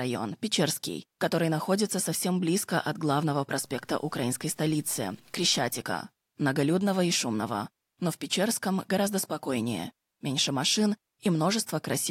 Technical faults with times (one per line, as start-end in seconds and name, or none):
3.62-5.82 low bit depth without dither